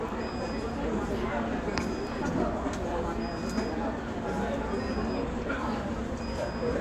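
No audible technical faults present.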